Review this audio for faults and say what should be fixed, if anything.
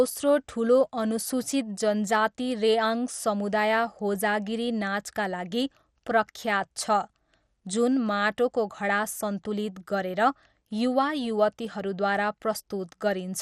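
The speech sounds dull and granular from start to finish. Nothing is heard above about 15.1 kHz. A gurgling, watery distortion sits on the voice throughout. This is likely MP2 compression, at a rate that fits roughly 64 kbps. The coder splits the sound into 32 sub-bands and shares out bits. Starved of bits, it shuts off the top bands and quantises the rest coarsely. Bands flicker in and out. Keep the master uncompressed, or encode at a much higher bitrate.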